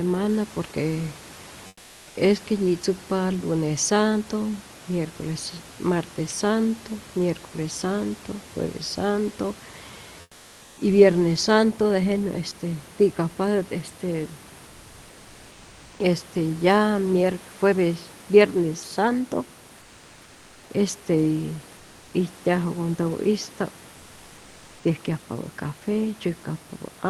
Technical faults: comfort noise in place of the background

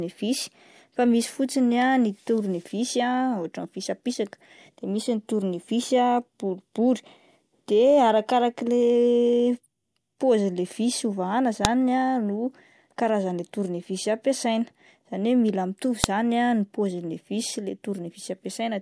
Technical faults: file header played as audio

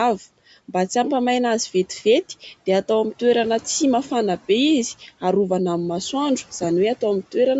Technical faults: Bluetooth LC3 compression

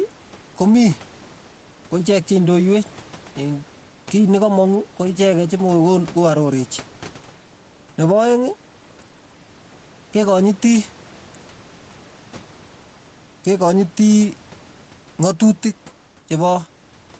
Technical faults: gain pumping

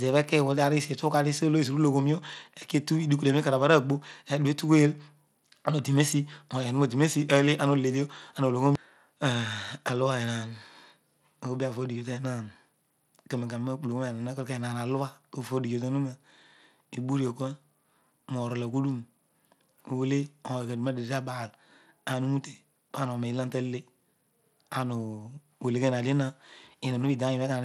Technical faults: Bluetooth SBC compression

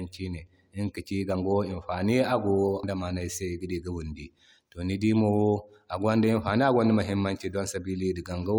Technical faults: compressed frames skipped

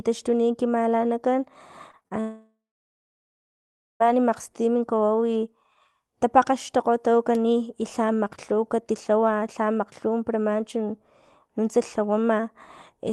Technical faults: repeated packet loss (robotic sound); long network dropout

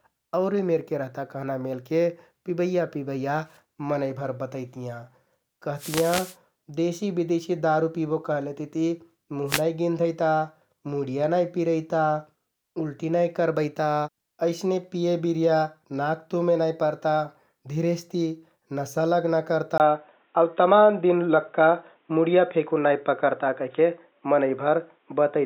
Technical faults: wireless microphone noise hit; input switched to a poorer device

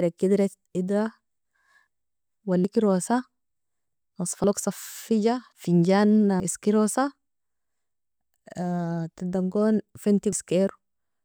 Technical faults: dropped buffer (overrun)

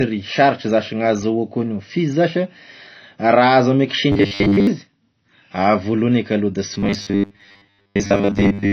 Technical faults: low-bitrate audio saved at a high bitrate; robotic sound from repeated short buffers

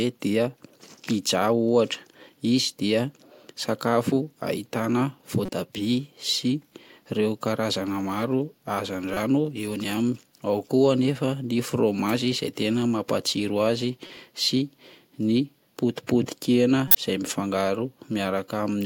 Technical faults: corrupt frame decoded

